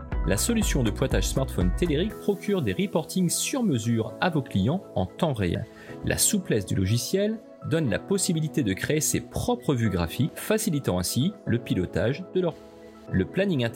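At 5.55 s the audio jumps forward by about 200 ms, and at 10.29 s and 12.52 s it leaps ahead by about 400 ms each time. These are compressed frames skipped: whole chunks of the encoded stream never got decoded, which fits a couple and then about four frames of roughly 93 ms.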